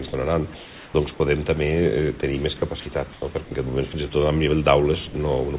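The audio comes through a narrowband call path with nothing above 4 kHz, which fits G.711. Sound dropped by the voice detector shows up at 0.08–0.13, 2.21–2.23, 3.93 and 5.07–5.14 s, where brief bits vanish into steady noise, likely because the detector mistook them for background. From 0.55 to 0.94 s you get comfort noise in place of the background: the real room tone turns flat and featureless, about 1 dB quieter, likely from discontinuous transmission. Then 2.57–2.86 and 3.13–3.51 s sound chopped by the voice detector, with holes where sound is replaced by comfort noise, likely as it toggled repeatedly.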